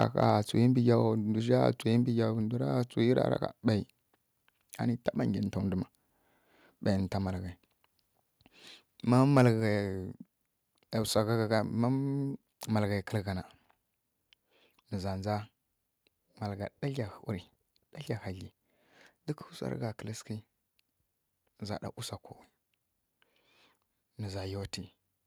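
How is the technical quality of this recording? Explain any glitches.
One brief glitch sits at the very start of the speech.

Microphone overload, 0.01 to 0.04 s: the loudest peaks push about 2 dB past the converter's ceiling, likely because the input gain was set too high. Their tops are sliced flat across a small fraction of samples, producing a quick, harsh crackle.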